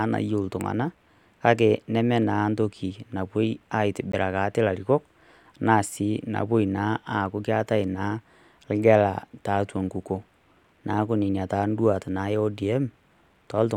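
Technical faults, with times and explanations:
4.12 s, Bluetooth dropout: the speech cuts to silence for about 15 ms, a brief hole, then resumes further along as if it had kept playing underneath. The likely cause is a wireless link that delivered what sounds like a single packet too late, so it was discarded.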